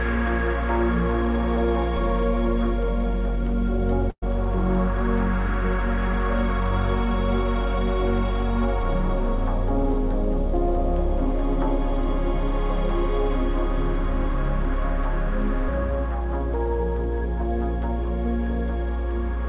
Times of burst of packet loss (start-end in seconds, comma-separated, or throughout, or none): 4.10-4.24